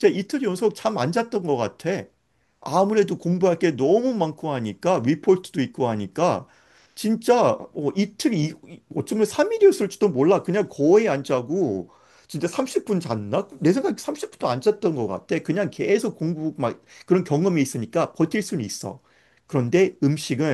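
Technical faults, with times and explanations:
No technical faults are detectable anywhere in the speech recording, and the signal stays intact and continuous throughout.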